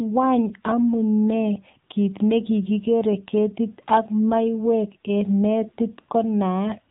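AMR narrowband mobile codec damage runs through the whole speech clip. The audio has been squeezed through an 8 kHz narrowband path, so nothing above about 3.8 kHz survives, leaving the voice thin and boxy. The codec rebuilds each 20 ms frame from a vocal-tract model excited by a handful of pulses, and at this low rate the result is plainly buzzy and synthetic, which fits one of AMR-NB's lower modes, around 7.95 kbps.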